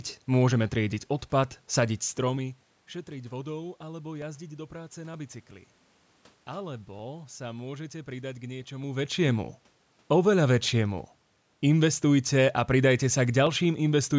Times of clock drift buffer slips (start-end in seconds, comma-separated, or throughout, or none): 0.52-13.47